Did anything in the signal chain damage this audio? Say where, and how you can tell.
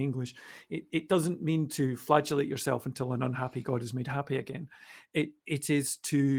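No, nothing in the chain damaged this speech; the Opus voice compression keeps the full band and behaves as that codec normally does at its setting.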